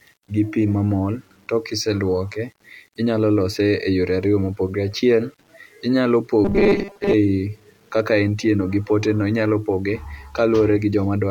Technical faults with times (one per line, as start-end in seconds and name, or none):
0.00-11.30 low bit depth without dither
6.45-7.14 robotic sound from repeated short buffers